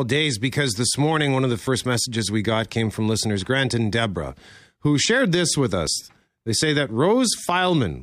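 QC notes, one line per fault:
1.67 s and 5.87 s, dropped buffer (overrun): Each point has an abrupt jump where the sound skips forward with no gap of silence. The first comes just before "messages we got came". The second follows "who shared this with". Each jump loses roughly 10 ms of audio. The likely cause is the recording software failing to collect a buffer before the hardware overwrote it. The two sides of the missing piece then join directly, and that abrupt join is the jump.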